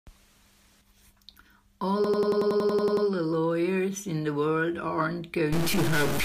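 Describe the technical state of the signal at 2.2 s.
A rapid machine-gun stutter is audible at 2.2 s: one 93 ms fragment of speech repeats exactly, about 11 times per second, from 2.04 s to 3.07 s. This is a system hang loop. The computer or audio driver stalled, and the sound hardware kept replaying the same ring buffer in place of fresh audio. A loop length of 93 ms fits a 4096-sample buffer, and the fragment cycles 11 times before normal playback resumes.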